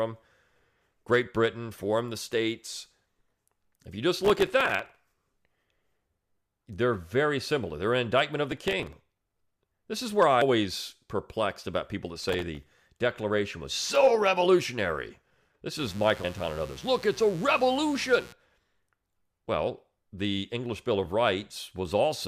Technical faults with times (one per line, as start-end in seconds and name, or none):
4.25-5.15 processor overload crackle
8.52-9.54 processor overload crackle
10.41 damaged data in a compressed stream
12.20-12.71 processor overload crackle
15.79-18.33 mains buzz